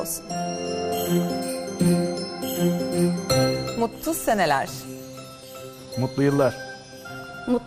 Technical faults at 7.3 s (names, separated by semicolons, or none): MP2 compression; DAB burbling